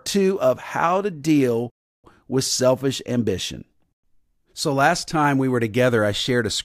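At 1.70 s the speech cuts to silence for 0.34 s, resuming with "with selfish ambition": a playback stall, likely the player running out of buffered data.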